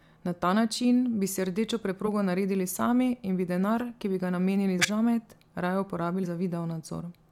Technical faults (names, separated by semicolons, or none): compressed frames skipped